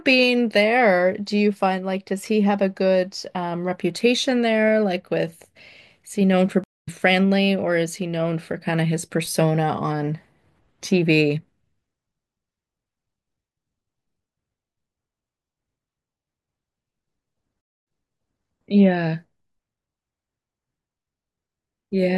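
At 6.64 s the speech drops out for about 0.2 s, a stream reconnect. The connection broke, the player went silent, then rejoined with a fresh decoder. The speech resumes roughly 150 ms further on, so a sliver of it is skipped. At 17.61 s a second stream reconnect cuts in, with 216 ms of silence. This time the server resent earlier data. The audio picks up 624 ms back, repeating that stretch, before settling by 18.45 s.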